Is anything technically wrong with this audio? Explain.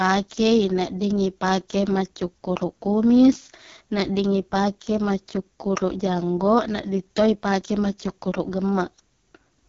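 Yes. Throughout, the speech went through an AMR wideband (HD Voice) codec at what sounds like its lowest 6.6 kbit/s mode, leaving it rough and raspy with nothing above 7.1 kHz.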